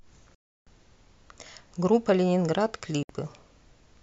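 At 0.35 s the speech cuts to silence for about 0.32 s, returning at 0.67 s, and a shorter hole of about 64 ms follows at 3.03 s. Both have abrupt or briefly faded edges, and the speech resumes further along, as though it kept playing during the gap. That skipped material, rather than a pause that picks up where it stopped, marks these as a likely Bluetooth dropout, where audio packets arrived too late and were discarded.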